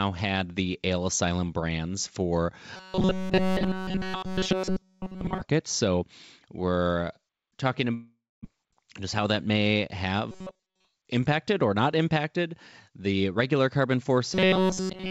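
From 2.77 to 5.41 s, just after "brands for", the speech turns into robotic sound from repeated short buffers. It has a rigid metallic buzz at 188 Hz that only loosely follows the syllables. A fixed pitch at that rate means a segment about 5.3 ms long is being replayed, which fits a buffer of that size. Here practically all of the audio is repeated material, most likely because new audio was arriving too seldom and the receiver kept recycling its last block.

At 7.94 s, after "we're talking", a long network dropout begins and runs to 8.47 s. The receiver fills 506 ms: first a decaying continuation of the last sound, then about 250 ms of silence. When the audio resumes, 400 ms of the original is gone. The pattern points to packets likely stalling in transit, with the path delay shifting by around a tenth of a second.

From 8.65 to 9.76 s the jitter buffer speed-up drains the backlog. Pitch-period-sized pieces, roughly 70 ms in total, are cut out, so the speech plays at 107% speed with unchanged pitch and sounds slightly hurried.

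The robotic buzz at 188 Hz returns from 10.31 to 10.89 s, ending just before "impacted or not impacted", with most of the audio repeated. It returns again from 14.34 s to the end at 15.11 s, fully repeated. Both are likely the same starved-buffer behaviour as before. Throughout, the call path's wideband coding, consistent with G.722 at 64 kbps, leaves nothing above 8 kHz.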